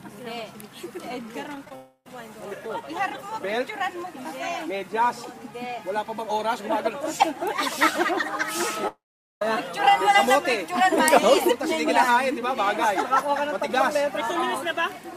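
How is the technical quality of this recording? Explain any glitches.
The recording has clear network glitches: a cluster of short concealed packet losses and two long network dropouts.

Short concealed packet loss at 1.55 s, 1.65–1.67 s and 1.69–1.71 s: each time about 10 ms of data arrived too late, and the receiver patched the gap by extending the preceding sound before blending back. Each one is heard as a brief smear or wobble.

Long network dropouts at 1.75–2.07 s and 8.88–9.42 s, likely from the connection stalling: roughly 0.3 s and 0.54 s of audio are missing. The last sound trails off as a fading buzz or hiss, followed by silence of about 70 ms in the first case and 440 ms in the second. The audio then resumes with that stretch gone.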